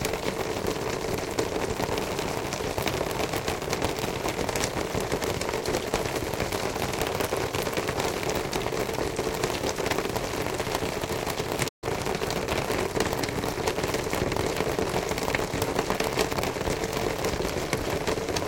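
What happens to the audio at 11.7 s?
A playback stall at 11.68 to 11.84 s: the sound cuts off mid-flow into silence, likely because the player ran out of data or its thread was blocked.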